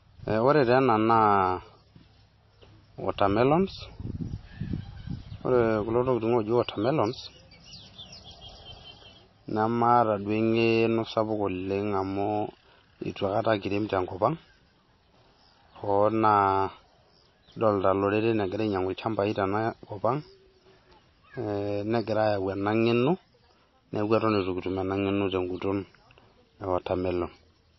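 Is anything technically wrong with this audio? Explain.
Yes. Throughout the speech, the sound is watery and swirly, with a hard treble ceiling near 5.8 kHz, likely MP3 compression at a low bitrate around 24 kbps. A spectrogram would show a flat cutoff and flickering gaps.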